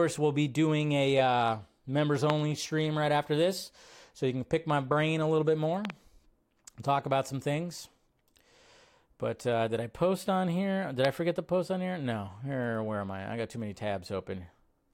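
At 2.3 s, just before "stream right after this", there's a loud pop, a sharp click about 20 dB above the speech. At 5.85 to 5.92 s, after "brain a little bit", there's a quick double pop. At 11.05 s, right before "I forget to post", there's another loud pop. Each is likely a voltage spike from a switch or static landing on top of the speech.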